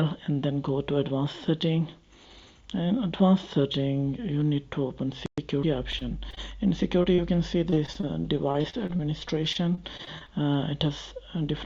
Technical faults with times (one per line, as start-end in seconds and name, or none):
5.91-6.38 repeated packet loss (robotic sound)
7.03-7.20 short concealed packet loss
7.70-9.01 repeated packet loss (robotic sound)
9.53-10.56 repeated packet loss (robotic sound)